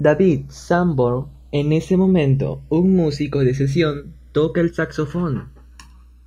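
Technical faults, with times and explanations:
Throughout, channels drifting apart: the two channels run on slightly mismatched clocks, around 100 ppm, so their offset creeps to roughly 0.7 ms by the end. Summed to mono the speech takes on slow flanging, seen as comb notches gliding downward on a spectrogram.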